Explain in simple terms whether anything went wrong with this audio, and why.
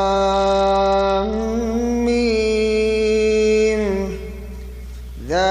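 From about 0.33 to 1.42 seconds the sound turns dull and muffled, as if the treble had been turned down, and a gritty, sandy noise creeps in underneath. Then it clears up again. This is a Bluetooth SBC bit pool drop. When the wireless link got crowded, the phone sent the audio with far less detail so it wouldn't cut out. The highest frequencies were dropped and the rest was stored roughly, which causes the dullness and grit until the link recovered.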